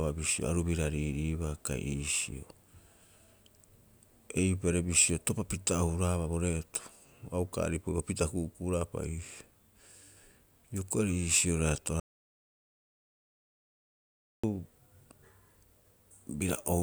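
From 12.00 to 14.44 s the speech cuts to dead silence, an audio dropout likely from lost input; unlike a pause, even room tone vanishes.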